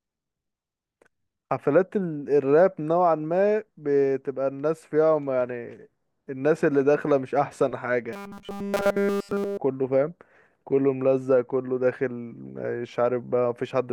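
From 8.13 to 9.57 s the speech turns into robotic sound from repeated short buffers: a rigid, metallic 200 Hz buzz that still loosely tracks the talking. The likely cause is starved playback looping a 5 ms chunk, with essentially all the real audio skipped.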